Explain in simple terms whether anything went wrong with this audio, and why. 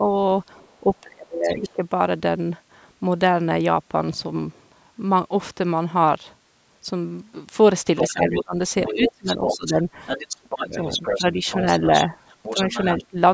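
Two things went wrong, both likely caused by the call's echo canceller struggling when both people talked at once.

Speech suppressed in double talk: the canceller couldn't tell this talker from the loudspeaker echo, so it turned everything down. The talker's speech dips or breaks up at the very start, around 0.81 to 1.83 s, 8.11 to 9.87 s, 10.44 to 11.4 s and 12.55 to 13.17 s.

Other side's voice leaking through: the canceller didn't fully remove the far-end voice picked up from the loudspeaker. That second voice comes through faintly at 1.48 to 1.72 s, then much more noticeably from about 7.97 s to 13.06 s.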